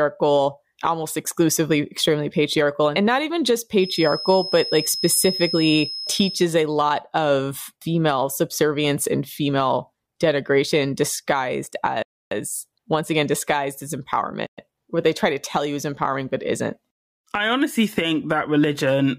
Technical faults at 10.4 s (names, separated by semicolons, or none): none